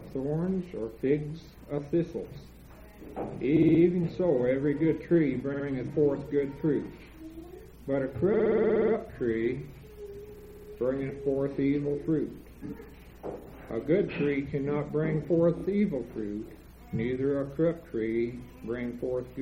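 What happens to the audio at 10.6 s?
At 10.6 s the audio stutters from repeated frames: between 10.38 and 10.68 s one 60 ms block of compressed audio plays five extra times, stretching the clip by 300 ms. A spectrogram shows the same 60 ms patch tiled end to end, and the waveform shows identical repeating segments.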